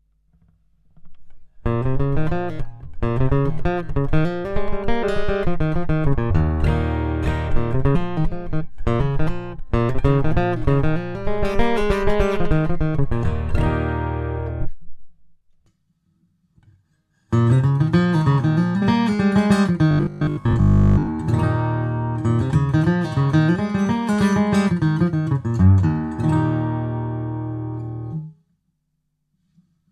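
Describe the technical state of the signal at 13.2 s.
At 13.24 s compressed frames were skipped: the decoder never played a run of frames, either missing from the file or rejected as damaged, so the audio jumps ahead about 150 ms, roughly seven 23.2 ms frames. The result is an audible jump in the audio at that join.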